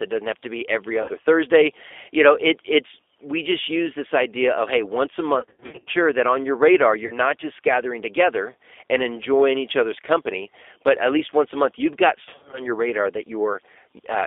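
Speech carried over a G.729 codec, band-limited to roughly 300 Hz to 3.6 kHz, with the rough, synthetic texture of an 8 kbit/s pulse-and-filter rebuild. VoIP packet loss concealed by the speech codec stretches sound into a buzzy tone or a coloured noise that fades at 1.02 s after "have to be every", 5.39 to 5.91 s, 7.06 to 7.19 s between "that on your radar" and "just gathering together and", and 12.23 to 12.67 s after "a month you've got". In each case the decoder extrapolates from earlier frames.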